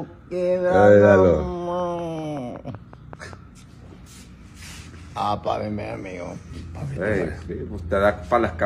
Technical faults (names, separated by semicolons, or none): train of clicks